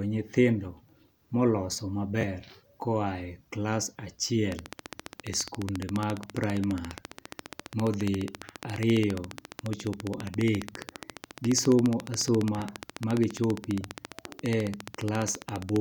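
From 4.52 to 15.77 s, a train of clicks ticks evenly at 14.6 per second, loud through pauses, unlike random crackle; likely interference from equipment.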